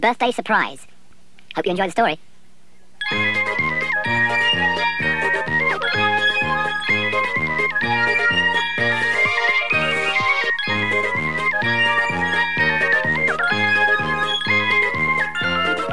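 From start to end the audio runs at a wrong sample rate: it plays 1.5 times too fast and about 7 semitones high, which fits 16 kHz material played back at 24 kHz. Speed and pitch rise together, unlike a pitch shift or time-stretch.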